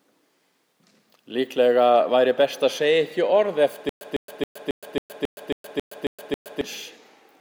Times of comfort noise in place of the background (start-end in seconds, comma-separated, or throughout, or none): none